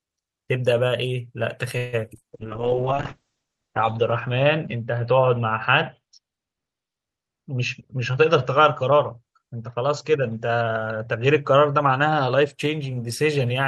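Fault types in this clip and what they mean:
Call audio freeze, 1.77 to 1.95 s: the sound stretches into a fading continuation for about 0.15 s, with nothing lost afterwards. Delayed packets likely emptied the jitter buffer, so the receiver extended the last sound and resumed where it stopped, adding delay.
Short concealed packet loss, around 2.17 to 2.31 s, with a second overlapping hole at 2.20 to 2.23 s: roughly 20 ms of audio missed the decoder each time. The receiver papered over the gaps by extending the preceding sound, giving a brief smear before blending back.
Call bitrate drop, 2.34 to 12.60 s: the sound turns rough and muffled, with its top end cut from 20 kHz to 8 kHz. That fits the encoder falling from about 48 to 6 kbps, staying at its lowest for about 1.1 s.
Jitter buffer speed-up, 7.43 to 9.44 s: the audio runs about 7% fast at unchanged pitch. The receiver trimmed many tiny pitch-period slices, roughly a seventh of a second in total, to shrink the backlog that had built up in the buffer.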